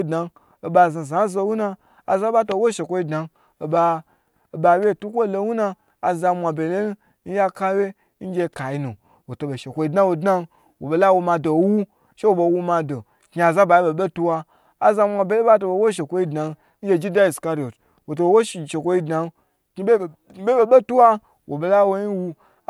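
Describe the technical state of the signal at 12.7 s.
At 12.7 s the speech signal is intact, with no audible dropout, distortion or other fault at that moment.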